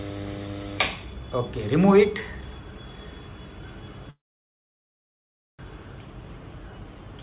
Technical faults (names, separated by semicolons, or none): call audio freeze